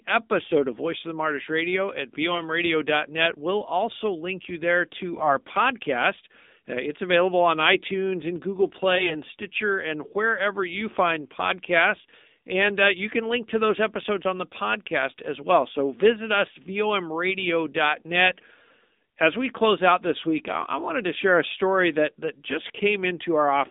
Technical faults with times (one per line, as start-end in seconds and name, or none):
0.00-23.70 AMR narrowband mobile codec
2.32-2.42 AMR bit errors
5.16-5.28 AMR bit errors
8.96-9.16 AMR bit errors